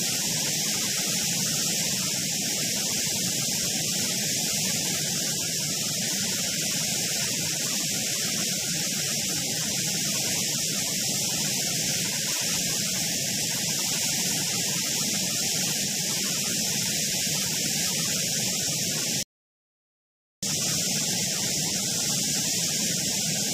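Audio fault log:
19.23–20.43 s, rebuffering stall: the player exhausted its downloaded audio and waited for more, so the sound drops to silence for about 1.2 s, then resumes exactly where it stopped.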